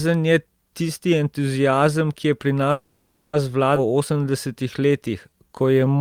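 At 2.71 s, right after "je pri", the speech stops moving forward for 0.62 s. The last sound is carried on as a fading buzz until 3.35 s. Then the speech resumes where it stopped, with nothing lost. This is a call audio freeze. The likely cause is delayed packets that left the jitter buffer empty.

At 3.75 s there is a skip ahead. Roughly a third of a second of speech is gone. The two sides are joined by a 10 ms bridge ending at 3.78 s. This audio was dropped while later audio was already queued.

From 3.87 s to 5.98 s comes a jitter buffer slow-down. Single pitch periods and bits of pauses are repeated to rebuild a reserve. This adds 231 ms. The speech runs at 89% speed with unchanged pitch, so sounds are drawn out.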